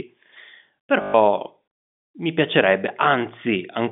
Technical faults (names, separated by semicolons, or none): packet loss with last packet repeated